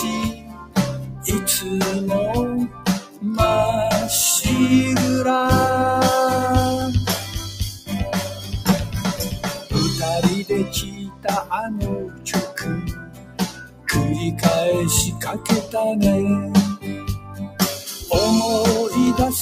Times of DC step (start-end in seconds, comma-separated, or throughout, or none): 6.81, 19.07